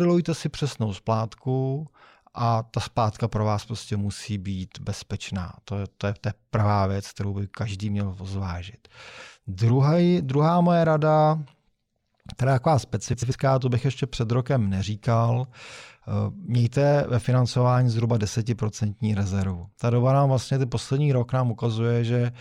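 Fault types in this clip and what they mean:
Frames out of order: two adjacent blocks of about 93 ms each were decoded in swapped sequence, at 8.99 s and 13.13 s, giving a brief garbled flutter. On a spectrogram the stretch shows abrupt discontinuities; the waveform shows hard edges, with no lost time.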